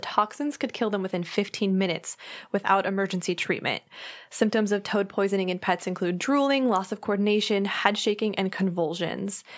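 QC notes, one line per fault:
No fault found in the speech clip, so there is nothing to list.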